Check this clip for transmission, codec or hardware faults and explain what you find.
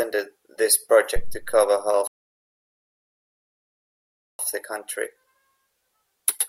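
Two faults are present in this speech clip: a hardware thump and a playback stall.

From 1.16 to 1.62 s there is a phantom power thump. A supply switching on the live input sends a voltage step through the coupling capacitors, giving a deep thud that decays in about 100 ms. The waveform shows a large low-frequency swing, and the spectrogram shows a dark band near the bottom.

From 2.07 to 4.39 s a rebuffering stall occurs. Playback ran short of downloaded audio and halted, adding about 2.3 s of silence before resuming intact with "the country". The waveform goes flat, and the spectrogram has a blank gap across all frequencies.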